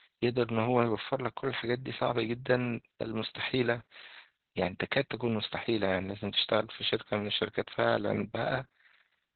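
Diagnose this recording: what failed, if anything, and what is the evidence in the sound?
The failure is at the codec stage: Opus voice compression running its SILK speech coder in narrowband mode for the whole clip. The speech has no energy above about 4.3 kHz, so it sounds muffled and boxy, and it also has a hoarse, slightly robotic grain from coarsely coded excitation, which fits a bitrate near 8 kbps. A plain low-pass filter or band-limited line would dull the speech just as much but leave the voiced sound smooth, without that rough, buzzy texture.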